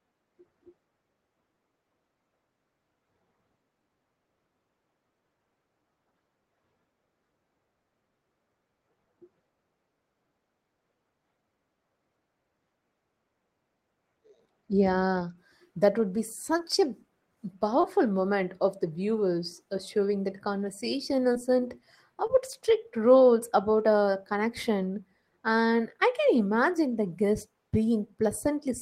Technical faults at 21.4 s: short concealed packet loss

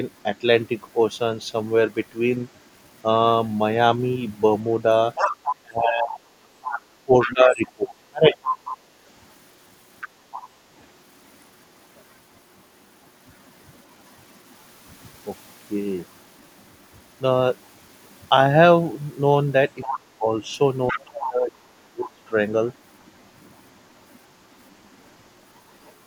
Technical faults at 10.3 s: other side's voice leaking through

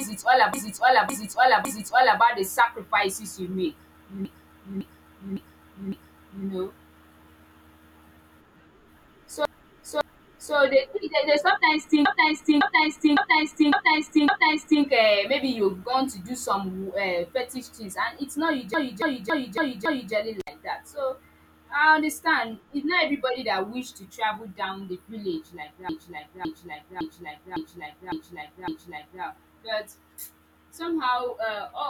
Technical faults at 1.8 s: repeated frames

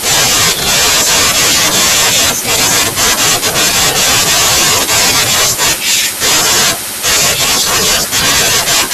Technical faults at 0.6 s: hard clipping

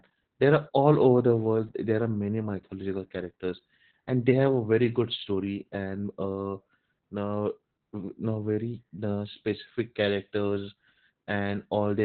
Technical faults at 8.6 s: Opus voice compression

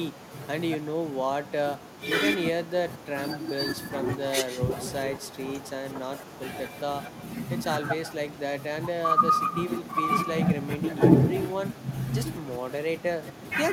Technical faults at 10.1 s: echo with no canceller

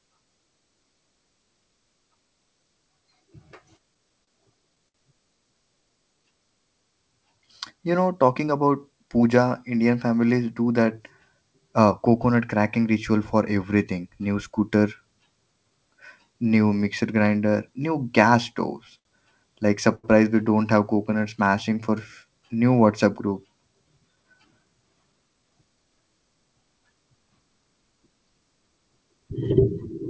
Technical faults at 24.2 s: jitter buffer speed-up

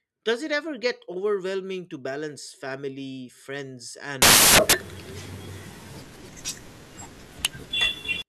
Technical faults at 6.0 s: samples built from the wrong bytes

